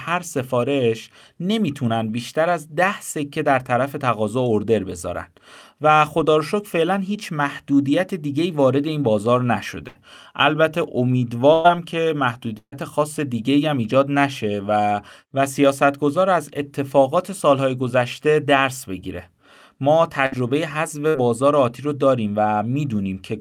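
Bursts of packet loss at 9.87, 11.53, 12.58, 20.26 and 21.09 s drop 60 to 140 ms of speech; concealment stretches the last sound into a fading buzz or hiss, reaching silence at 12.58 s, before the speech resumes further on.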